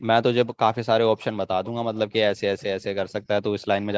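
Speech with faint echo leak at 1.19–1.25, 1.64–1.68, 1.96–2.16, 2.58–2.63 and 3.61–3.67 s. Brief, very quiet copies trail the speech by 490 ms. A loudspeaker echo canceller likely let them through.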